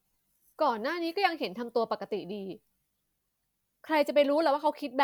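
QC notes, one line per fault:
No faults heard.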